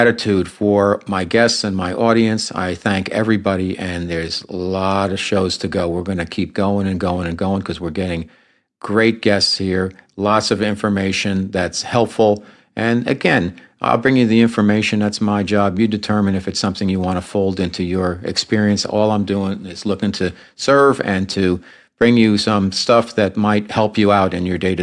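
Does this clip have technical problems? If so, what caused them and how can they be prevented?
No, nothing stood out as a technical problem on listening to this clip.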